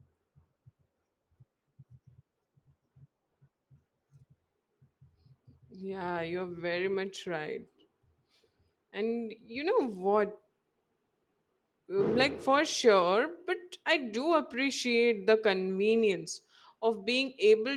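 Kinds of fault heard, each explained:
No kinds of fault are heard in this speech clip.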